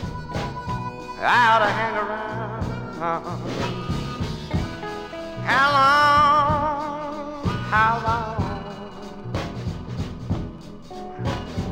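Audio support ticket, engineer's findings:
Light metallic shimmer on sibilants and high notes, whole clip; top octave dulled. Probable component: sample-rate converter using linear interpolation, fitting a 22 kHz to 48 kHz step. Imaging from linear upsampling: weak straight-line filter leaves a mirrored spectrum copy from about 11.03 kHz to 22.05 kHz, roughly 40 dB down.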